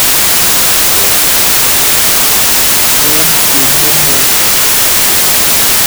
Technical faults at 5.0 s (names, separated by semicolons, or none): wrong sample width